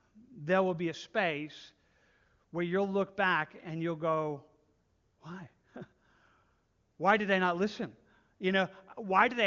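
No faults are audible in the speech; it carries the band limit of the AMR wideband (HD Voice) codec, with nothing above 7.4 kHz, and any coding damage is faint at most, which fits the codec's top 23.85 kbit/s mode.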